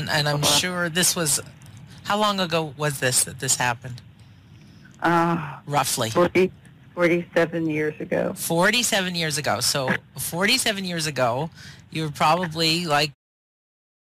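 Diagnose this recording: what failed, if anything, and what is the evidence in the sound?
Hard clipping runs through the whole clip: the signal is driven about 6 dB past full scale at the converter or a fixed-range sample format, and roughly 2% of samples are flattened. The squared peaks add high harmonics, heard as crackle on every loud moment. The fade-out ending at 13.15 s is a normal smooth edit.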